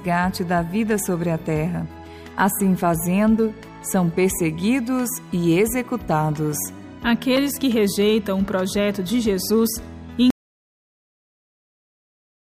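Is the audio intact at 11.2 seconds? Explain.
No. An audio dropout to silence runs from 10.30 s to the end. The sound cuts off to total silence, with no room tone. Input was likely lost while zeros kept recording.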